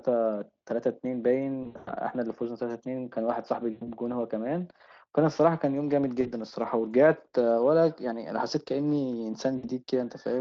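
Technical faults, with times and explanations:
1.63–1.92 s, 3.71–3.88 s, 6.21–6.29 s, 9.57–9.68 s, VoIP packet loss concealed by the speech codec: the decoder stretches the last sound into a fading buzz, worst at 1.63 s, where about 200 ms of gaps are scattered.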